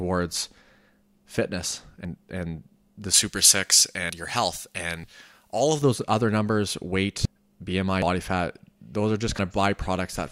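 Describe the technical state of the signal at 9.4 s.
At 9.39 s the speech jumps abruptly, skipping ahead by about a tenth of a second with no gap of silence. This is likely a dropped buffer (overrun): samples were overwritten before being read, so the surrounding audio is spliced directly together.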